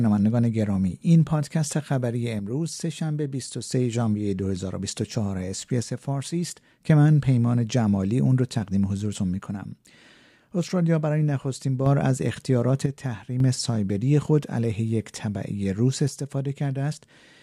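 Speech, with the level dropping abruptly by about 6 dB five times: 2.40 to 3.72 s, 5.83 to 6.90 s, 9.46 to 11.86 s, 12.86 to 13.40 s, and 16.08 s to the end at 17.43 s. Each dip starts as a clean step. The likely cause is one channel dropping out, so the mono sum keeps only half of the shared signal and loses anything unique to the missing side.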